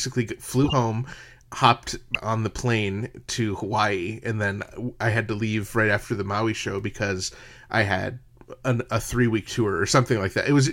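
A brief squeaky burst of noise cuts through the speech from 0.64 to 0.73 s, and a sharper, louder blip follows at 2.14 s, just before "on the plane to". Both are corrupt frames decoded: damaged compressed data was played anyway, throwing energy into the wrong frequencies for a few frames.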